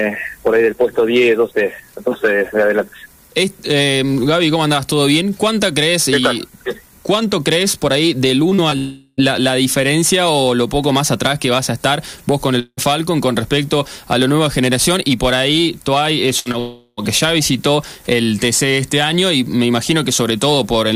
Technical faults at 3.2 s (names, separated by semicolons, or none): none